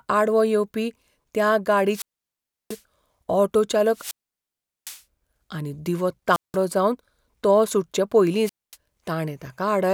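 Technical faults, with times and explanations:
1.88–2.83 s, 3.92–5.03 s, 6.31–6.57 s and 8.43–8.76 s: wireless microphone squelch dropout. The radio link from the analogue FM microphone fades, and as the carrier weakens the receiver's squelch closes and mutes its output. Each event is a short swell of hiss or static followed by a gap of near silence lasting about 690 ms, 760 ms, 180 ms and 240 ms respectively, after which the signal recovers and the speech resumes.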